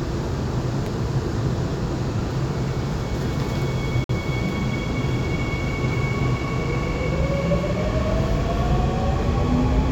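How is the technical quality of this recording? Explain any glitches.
There is one glitch. At about 4.04 to 4.11 s the sound drops out to silence for about 50 ms, then resumes. This is likely a Bluetooth stall: radio interference delayed packets, the headphones' buffer emptied, and playback halted until retransmitted data arrived.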